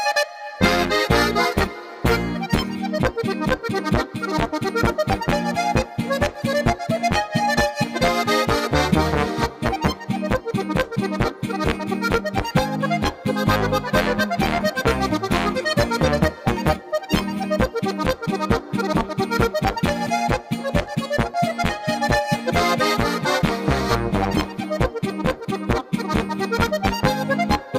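No technical faults can be heard anywhere in the recording.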